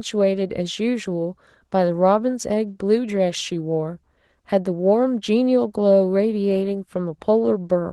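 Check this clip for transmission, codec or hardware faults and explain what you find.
One codec fault runs through the whole clip. From start to finish the speech sounds hoarse and faintly robotic. This is Opus voice compression in hybrid mode at a rate that fits about 16 kbps: SILK codes the excitation coarsely below 8 kHz, while CELT thinly fills the band above it.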